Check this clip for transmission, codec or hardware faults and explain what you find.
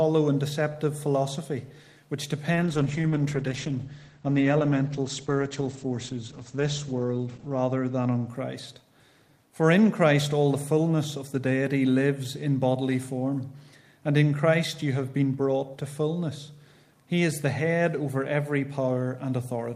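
One transmission fault is present: a call bitrate drop from 2.55 s to 8.33 s. The audio loses its top end, which falls from a full 20 kHz to roughly 8 kHz, and turns rough and watery. The worst stretch lasts about 5.1 s. This fits the call's bandwidth estimate collapsing and the encoder dropping from around 32 kbps to about 10 kbps. At that rate it codes more coarsely and discards the high frequencies. Unlike packet loss, the sound never drops out or clicks. Unlike a plain low-pass filter, the dullness comes with coarse, smeared texture, and both recover together when the bitrate returns.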